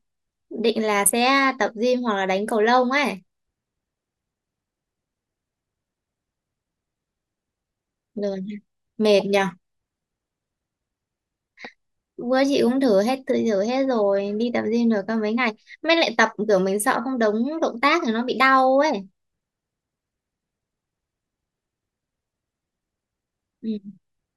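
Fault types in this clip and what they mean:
Nothing stood out on listening to this speech recording.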